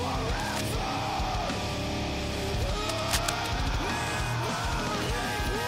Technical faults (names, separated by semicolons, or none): cable scratch noise